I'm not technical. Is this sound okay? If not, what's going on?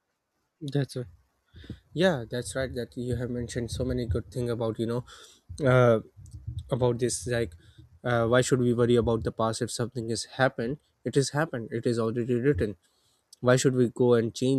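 No. From 5.01 to 5.53 s, software keeping two device clocks in step likely slowed playback in a single jump, a drift correction step. The speech runs about 5.4% slow and drops almost a semitone in pitch, then abruptly snaps back.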